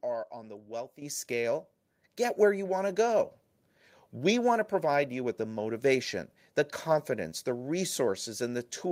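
The microphone volume stepped up twice: the call software judged the input too quiet and raised the device gain in single jumps, by about 8 dB at 1.02 s and about 3 dB more at 2.25 s. Each time, the speech and the background noise leap louder together.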